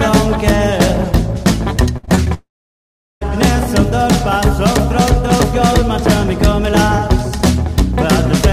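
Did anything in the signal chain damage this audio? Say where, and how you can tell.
Yes. The network stage failed twice in a row. From 1.97 to 2.28 s there is repeated packet loss (robotic sound): four short holes, the longest about 58 ms, each papered over by stretching the previous sound, so roughly a third of that span is synthetic fill. That repeated patching gives the stretch its choppy, robotic texture, with fragments of the audio audibly missing between the patched pieces.

Right after, from 2.34 to 3.23 s, the sound stops arriving altogether, most likely a long network dropout. The receiver first carries the last sound forward as a fading buzz or hiss, then gives way to near-silence for about three quarters of a second. When audio resumes around 3.23 s, it picks up later in the material, with close to 0.9 s simply gone rather than delayed.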